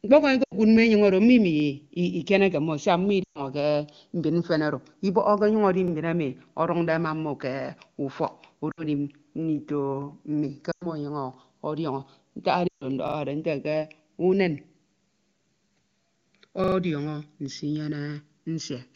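Across the whole clip, the two channels are drifting apart. They run on slightly different clocks, with an error of roughly 70 parts per million. The delay between them creeps up to under a millisecond by the end. Heard in mono, that sliding delay sweeps comb notches slowly through the spectrum. The result is a slow flanging over the speech.

The first lost AMR speech frames fall at 0.44 to 0.54 s. Radio errors corrupted a short run of frames. The decoder filled the gap by reusing the last good pitch and vocal tract settings while lowering the gain. The sound drops to near silence within two frames, as wideband concealment does. It returns weak or rough. Further dropouts follow at 3.24 to 3.40 s, 8.71 to 8.84 s, 10.71 to 10.87 s and 12.68 to 12.84 s. The longest gaps fade almost to silence.

A repeated buffer appears at 1.60 s. New audio arrived late, so the device replayed the last 40 ms block once. 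The same fragment is heard twice, with a hard join. It sounds like a quick stutter. The same fault returns at 5.88 s with one extra play, at 13.08 s with two, and at 16.64 s with three. That last one becomes a longer stammer. The AMR-WB codec at 23.85 kbit/s adds little of its own.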